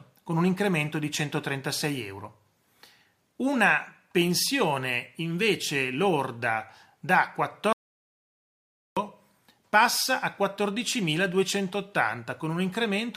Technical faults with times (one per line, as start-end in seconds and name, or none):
7.73-8.97 audio dropout to silence